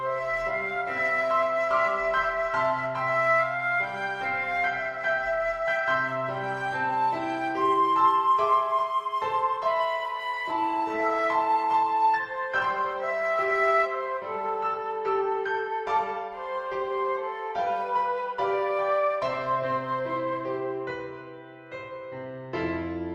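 From 10.15 s to 17.85 s the audio turns rough and watery, with the top end dulled so it sounds muffled, before clearing again. This is a call bitrate drop: the call's bandwidth estimate fell and the encoder was forced onto far fewer bits. The coarser coding and lost treble suggest a fall from a high rate of around 128 kbps to roughly 23 kbps, with the worst stretch lasting about 2.9 s.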